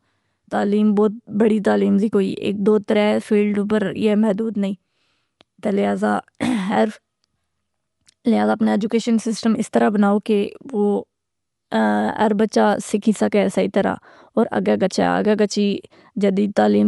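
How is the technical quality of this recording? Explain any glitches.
The technical quality is limited by codec damage across the whole speech recording. Throughout, nothing is present above 11.4 kHz, so the speech sounds dull, with a rough, fluttering noise around tonal parts. This is likely Dolby Digital compression at a low bitrate, around 64 kbps: the encoder narrowed the band and left many frequency lines without mantissa bits, which the decoder filled with dither noise.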